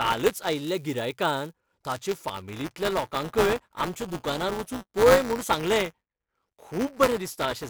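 A robotic 188 Hz buzz runs throughout: buffer tearing, where a slipped ring buffer, fitting 256 samples, splices a sliver of audio about 10 ms old into every period.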